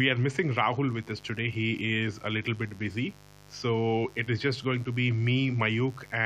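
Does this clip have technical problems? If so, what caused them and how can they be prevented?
Yes. A mains buzz runs under the speech from start to finish. It is a steady, raspy tone that sits about 25 dB below the speech. It is built on 50 Hz, with sharp spikes twice per mains cycle, so harmonics stretch up to several kHz. That points to a dimmer, a rectifier or a missing shield letting switching noise into the signal path. To prevent it, keep dimmers and power supplies away from the audio chain and use shielded, properly grounded cables.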